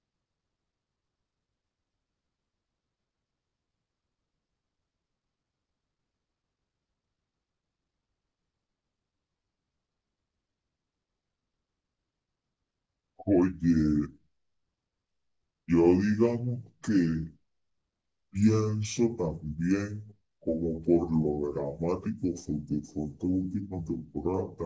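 From start to end, the speech runs at two-thirds speed and sits about 7 semitones low, the sign of a wrong sample rate. Unlike a pitch shift or time-stretch, tempo and pitch drop together by the same 0.667 ratio, which fits 24 kHz audio played at 16 kHz.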